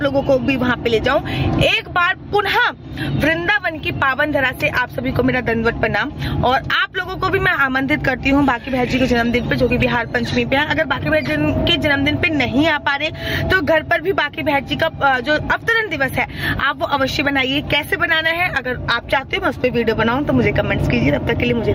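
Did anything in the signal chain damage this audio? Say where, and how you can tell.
Yes. The input gain looks set far too high for the microphone, and the likely cause of the gain pumping heard throughout is a fast limiter or compressor that clamps down hard on each loud sound. The level swings by around 15 dB. Loud and soft passages are pulled close together, leaving the whole clip squashed.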